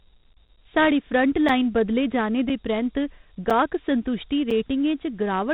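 Dialogic VOX ADPCM runs throughout this speech recording at 32 kbps, which fits 4-bit samples at 8,000 per second; nothing sounds above 3.9 kHz, and gritty quantisation hiss trails the speech. Gaps between chunks cut in at 0.48, 1.49, 2.49, 3.5 and 4.51 s: 6.5 ms holes at every 1.0 s join.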